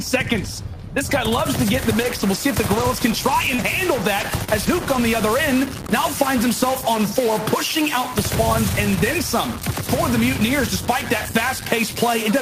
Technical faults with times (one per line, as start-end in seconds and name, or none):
1.79-12.42 stuck bit
2.03-4.97 scattered short gaps